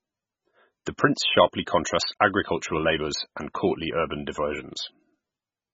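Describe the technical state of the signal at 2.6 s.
At 2.6 s the speech carries heavy damage that runs through the whole clip. It is likely MP3 compression. Nothing survives above 7.5 kHz, so the top end sounds dull and boxed in. The encoder had too few bits, so it cut the treble at a fixed point and dropped weak frequency lines. Those lines flicker on and off between frames. The result is a watery, swirling texture with smeared attacks. The damage is severe enough to suggest a bitrate near 16 kbps.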